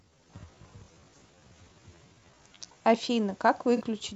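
From the start to 2.9 s, the audio was likely run through a time-stretched section: software slowed this stretch to about 0.58 times its original pace and held the pitch steady by repeating short slices of the waveform. The result is speech that drags at an unnaturally slow rate without dropping in pitch. At 2.9 s the pace jumps abruptly back to normal.

Between 3.77 and 3.82 s comes an AAC frame loss with concealment. Compressed frames went missing, and the decoder papered over the roughly 50 ms hole by rebuilding sound from the last good spectrum rather than leaving silence. A gap this short fits the loss of about two frames, too brief for the fill to fade out. It comes through as a short blurred, noisy and phasey patch where the speech loses its crispness for an instant before recovering.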